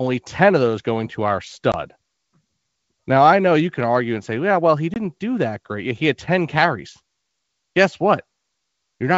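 Packet loss on an ADPCM call cuts 20 ms holes at 1.72 s, after "those going to our", and 4.94 s, before "do that great". Unlike a plain dropout, each hard-edged gap ends in brief, slightly distorted speech while the decoder's predictor resynchronises.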